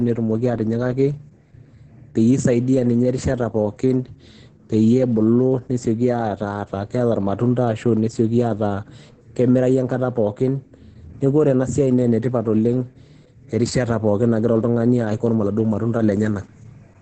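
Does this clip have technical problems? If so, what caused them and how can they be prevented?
Yes. Heavy Opus voice compression runs throughout the speech, which sounds muffled, hoarse and slightly robotic, consistent with coarse SILK coding at roughly 10 kbps. A spectrogram shows nothing above 9.1 kHz. Encoding at a higher bitrate would prevent this.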